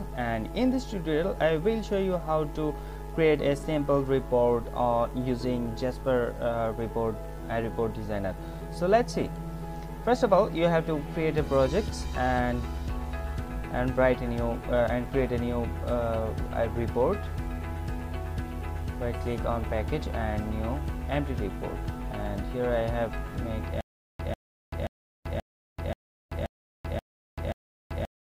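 Stutter with silent gaps from 23.81 s to the end: a 144 ms burst repeats eight times every 530 ms, separated by 386 ms of digital silence, likely from a stalled stream.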